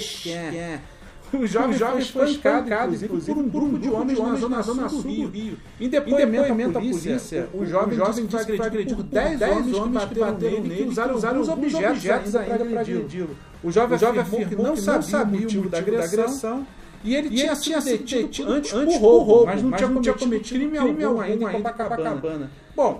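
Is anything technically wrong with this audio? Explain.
Yes. A doubled audio track runs through the whole clip: every sound returns as a second full-band copy about 300 ms later and at about the same loudness as the first. The likely cause is the same signal being captured twice, with one path lagging, or an edit leaving two copies out of step. Unlike room echo or reverb, the repeat never decays, adds no room colour, and comes back only once, identical to the original.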